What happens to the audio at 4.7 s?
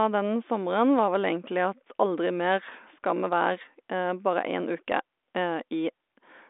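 Nothing goes wrong at 4.7 s: the speech passes through intact, with only the narrow telephone band of the G.726 ADPCM line, which carries nothing above about 3.8 kHz.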